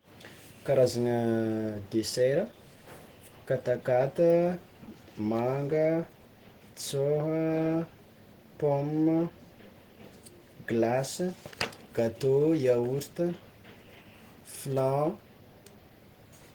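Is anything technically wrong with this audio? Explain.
Yes. Throughout the speech there is plainly audible Opus compression damage: the sound is hoarse, grainy and muffled, with rough, noise-filled detail. This likely comes from a low-bitrate Opus encode, around 16 kbps, in its hybrid speech mode, where the codec fills under-funded bands with noise or folded copies of lower bands. Unlike MP3 artefacts, there is little swirling or watery warble. Content still reaches about 20.1 kHz, so the damage is roughness, not a narrowed bandwidth.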